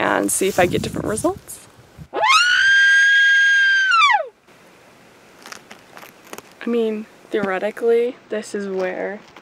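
From 8.06 s to the end, channel delay (comb filtering): one side lags by a couple of samples before mono summing, notching near 10 kHz and dulling the top.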